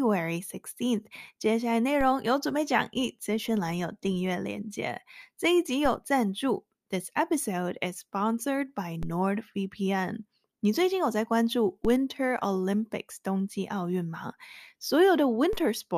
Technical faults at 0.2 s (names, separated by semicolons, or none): none